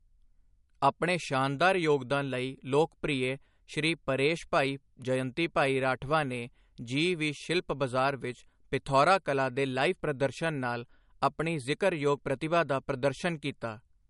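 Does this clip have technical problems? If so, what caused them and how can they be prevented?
Yes. Across the whole speech clip, nothing sounds above about 11.1 kHz, so sibilants and breaths have a dull, capped top, and the lossy smearing of a low-rate encode stays audible despite the file's generous size. This is likely low-bitrate audio saved at a high bitrate: an MP3 at roughly 50 kbit/s was re-encoded to a high-rate MP3, which cannot bring back the band or detail the first pass removed. Prevent it by encoding once, from the original uncompressed source, at the final bitrate.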